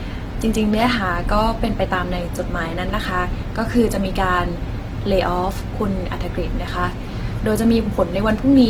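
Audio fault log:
throughout, Opus compression: The speech is likely encoded by Opus in its music (CELT) mode at a low rate, in keeping with roughly 16 kbps. Short of bits, the encoder keeps each band's energy but fills its detail with folded copies of lower bands or with noise, so the voice sounds plainly rough, grainy and noisy rather than swirly. Bandwidth stays fullband, with content reaching about 20.2 kHz.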